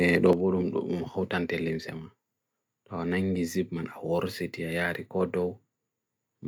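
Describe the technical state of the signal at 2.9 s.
At 2.9 s you're in the middle of a drop that starts at 0.33 s and runs right to the end: the speech sits about 6 dB lower. That's most likely one channel drops out, so after the mono fold only half the shared signal survives, and anything unique to the missing side is gone.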